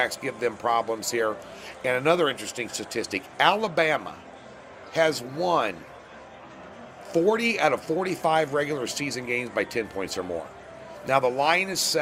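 No technical faults can be heard anywhere in the audio.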